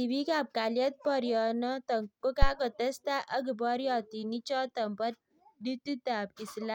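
At about 2.42 s there's a phantom power thump, a deep low thud that's gone by roughly 2.51 s. Somebody switched the supply on or off while the input was live, and that sudden DC step went straight through the coupling capacitors. It peaks around -10 dBFS and dies away fast, with a decay of about 20 ms, so you hear a short dull bump rather than a long boom.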